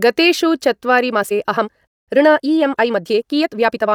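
At 1.10 s, right after "गतेषु चत्वारि", the pace of the speech jumps to about 1.58 times normal and stays there to the end, with the pitch unchanged. This points to a likely time-stretched section, where short pieces were dropped to squeeze the audio, leaving it rushed rather than higher-pitched like a plain speed-up. From 1.87 to 2.08 s the sound cuts to silence and then picks up exactly where it stopped, adding about 206 ms. That is a rebuffering stall, where playback waited for more data. Unlike a dropout, no speech is missing afterwards.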